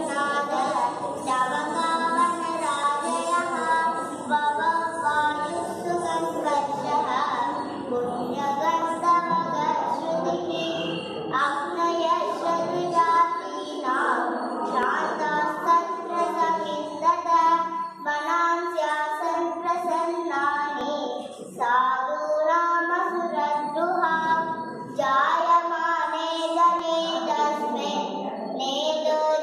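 An overlap between stream segments recurs every 6 seconds: adjoining segments carry time stamps that overlap, so the player discards a sliver of audio it wrongly treats as duplicated. Each time, roughly 14 to 18 ms of genuine sound disappears and the waveform jumps across the gap, producing a brief click or tiny skip at 2.84, 8.82, 14.83, 20.81 and 26.79 s, a steady rhythm that tracks the segment boundaries.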